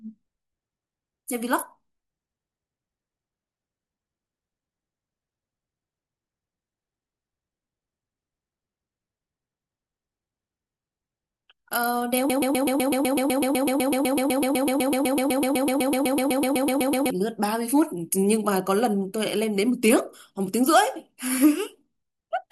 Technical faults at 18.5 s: none

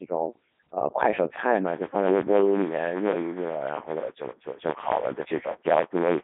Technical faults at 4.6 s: Codec 2 vocoder; buffer tearing

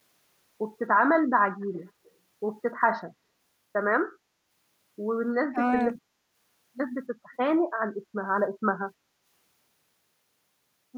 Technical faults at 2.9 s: none

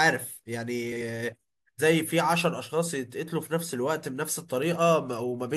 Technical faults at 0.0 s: none

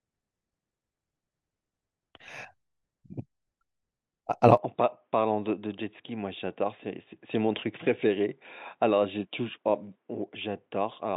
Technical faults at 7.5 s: input switched to a poorer device

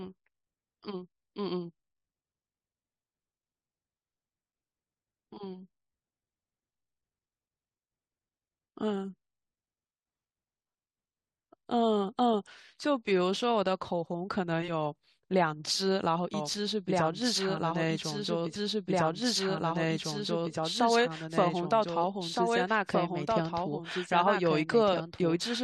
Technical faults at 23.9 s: doubled audio track

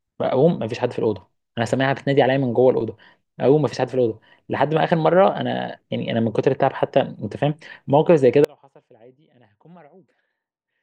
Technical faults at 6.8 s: none

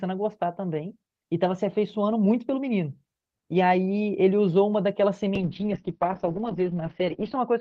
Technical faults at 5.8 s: call bitrate drop

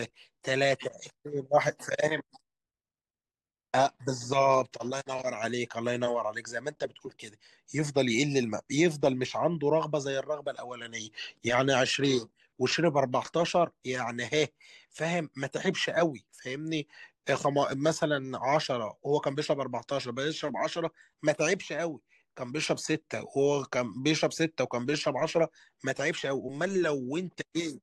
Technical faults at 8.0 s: none

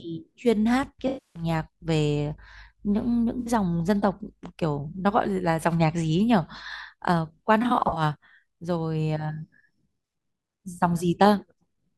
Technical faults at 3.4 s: AAC frame loss with concealment

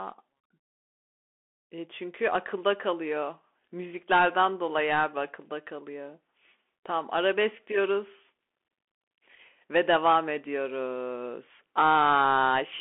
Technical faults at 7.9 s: Bluetooth CVSD headset codec

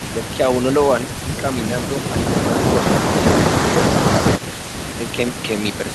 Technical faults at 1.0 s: echo leak

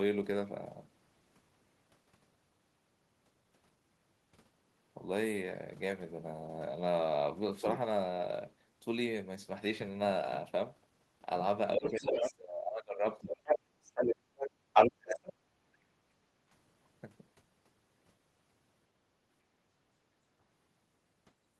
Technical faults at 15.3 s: speech suppressed in double talk; other side's voice leaking through

